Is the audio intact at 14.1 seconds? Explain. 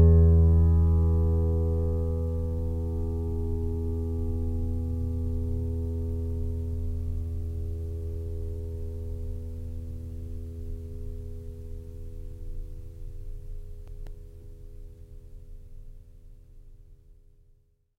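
No. At 14.1 seconds the music sits inside a short run of CD scratch ticks, from 13.68 to 14.26 s. A scratch on the disc wipes out more data than error correction can rebuild, and it does so once per revolution. The player then patches or mutes the missing samples. The result here is four sharp ticks, about seven per second, the longest about 1.5 ms.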